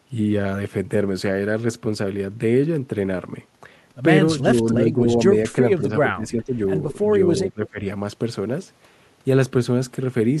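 From 4.74 to 5.06 s, 5.77 to 6.55 s and 7.37 to 7.84 s the speech dips in fragments, slightly at first, then by around 15 and 20 dB. That is speech suppressed in double talk, likely an echo canceller ducking overlapping talk. The level ducks unevenly rather than falling into clean, silent packet gaps.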